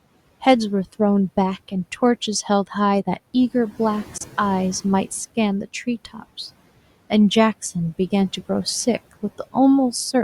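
Speech recording with a likely Bluetooth dropout: audio packets missed the headphones in time, so a roughly 23 ms hole cuts the speech at 4.18–4.21 s, which fits a single lost frame, before playback resumes as if it had continued. Faint room noise about 22 dB below the speech sits underneath.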